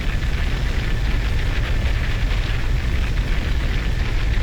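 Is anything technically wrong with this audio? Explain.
No, nothing technically wrong can be heard in this audio. There is no fault to point to at any moment in it.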